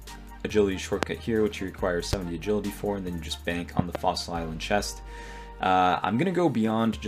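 Loud pops hit at 1.03 to 1.05 s, 2.13 to 2.16 s, and 3.79 to 3.97 s, where two arrive in quick succession. Each is a sharp thump roughly 20 to 25 dB above the sound, which carries on underneath, likely from a voltage pulse from a switch, plug or static.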